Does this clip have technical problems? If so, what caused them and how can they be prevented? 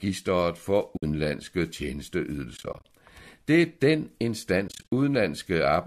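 Yes. The speech has AAC frame loss with muting: sound drops out at 0.97 to 1.03 s (60 ms, which fits about six 10 ms frames), again over 2.57 to 2.85 s (150 ms missing in short bursts of a few tens of ms), and at 4.68 to 4.91 s (160 ms scattered, runs up to about 50 ms). The decoder zeroes the missing spectrum and overlapping windows taper each hole, so a waveform shows soft-edged gaps, and a spectrogram shows blank vertical strips. The light coding damage that remains is likely the low-delay AAC compression itself. Prevention: add forward error correction or packet-loss concealment, and give the link a larger jitter buffer.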